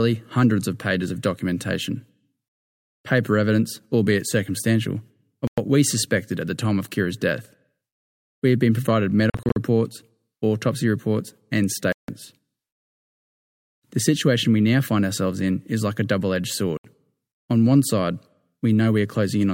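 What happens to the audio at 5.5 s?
At about 5.47 s the speech just cuts out for roughly a tenth of a second, coming back at 5.58 s. That gap sounds like a Bluetooth dropout: the likely cause is a handful of packets not reaching the headphones in time, so the output went silent. When it picks up again, the speech carries on from a later point, as though it had kept playing through the hole, so a short slice is missing.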